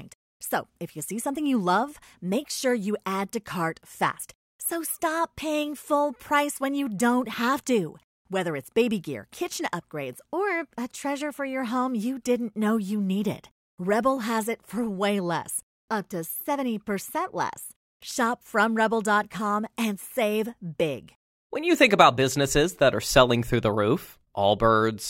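Nothing technically wrong can be heard in this audio. There is no fault to place in time and no cause to name.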